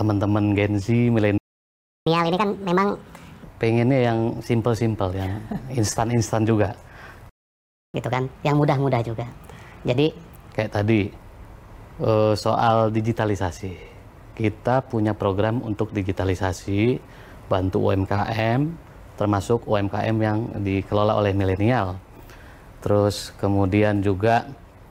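The audio has two playback stalls, at 1.38 to 2.07 s and 7.29 to 7.94 s, silent gaps of roughly 0.7 s and 0.6 s, likely from the player running short of data. Each is followed by catch-up at higher speed. From 2.07 to 3.44 s it runs 1.5 times fast, pitch raised about seven semitones. From 7.94 to 10.52 s it runs 1.25 times fast, about four semitones up.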